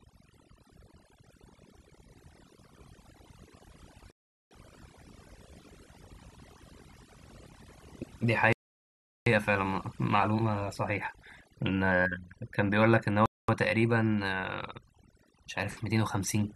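Overdone noise removal runs through the whole speech clip. A noise reduction stage set far too aggressively has pulled individual frequency bands down to almost nothing wherever they came close to its noise estimate. The quieter parts of the voice fell under that threshold and were cut along with the noise. The background drops and breaks up into twinkling, chirpy specks.

A rebuffering stall first hits at 4.11 s and lasts until 4.51 s, adding about 0.40 s. The player exhausted its downloaded audio and halted until more data arrived, so the sound drops to dead silence and then picks up exactly where it left off. No speech is skipped; the timeline is simply stretched. A second stall at 8.53 s to 9.26 s adds 0.74 s, and a third at 13.26 s to 13.49 s adds 0.23 s.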